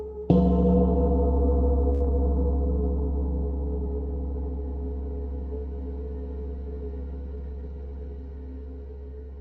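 At 1.93 to 2.03 s there is a short stall from a late packet. The jitter buffer ran dry, and the receiver held the last sound for 72 ms until the packet arrived, then resumed where it left off. Nothing is lost, but the sound lingers unnaturally with a faint buzz, and playback now runs 72 ms later.

Right after, at 2.05 to 2.08 s, comes a short concealed packet loss. About 40 ms of audio is skipped, bridged by only 10 ms of synthesized continuation, as the receiver catches up and cuts the delay by roughly 30 ms. It sounds like a brief smear or wobble where a sliver of sound vanishes.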